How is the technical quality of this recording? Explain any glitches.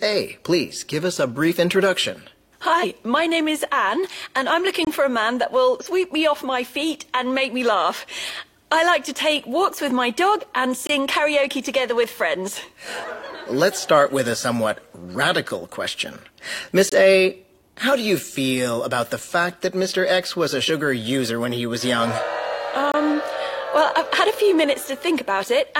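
The recording has two kinds of glitch, and both recur.

Compressed frames are skipped at 2.79, 5.79 and 20.65 s. Whole compressed frames of 46.4 ms never reach the output. The sound jumps ahead by about 100 ms twice and about 50 ms once.

Gaps between chunks occur at 4.85, 10.87, 16.89 and 22.92 s. The audio arrives in 6-second chunks, with 23.2 ms of silence at each join. No sound is lost. Each gap is a short hole, regular as clockwork.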